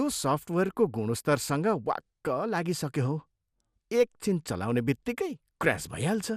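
Throughout, the speech sounds dull and gurgling, with nothing above 15.1 kHz and flickering upper bands, likely MP2 compression starved of bits, consistent with roughly 80 kbps.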